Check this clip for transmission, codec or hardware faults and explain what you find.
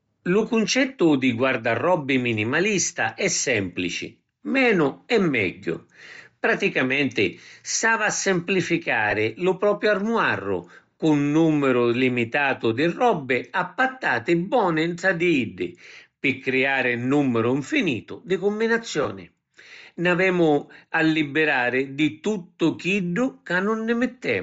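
Two transmission faults are present: codec damage across the whole recording and two brief dropouts.

Bluetooth LC3 compression, present throughout: the link is likely carrying LC3 at a low rate, and the sound fits roughly 32 kbps in 10 ms frames. At that rate the encoder discards much of the upper spectrum and substitutes shaped noise. The speech therefore has a plainly audible breathy, grainy sheen on sibilants and upper harmonics, and the treble sounds synthetic rather than crisp.

Lost LE Audio frames at 9.11 s and 19.03 s: each time, about 20 ms of data failed to arrive. The decoder concealed each gap by reusing the previous spectrum with randomised phase signs. Each spot is heard as a short, noisy smear where the speech briefly turns rough and hazy before clean decoding resumes. Both gaps are too short for the concealment to fade down into silence.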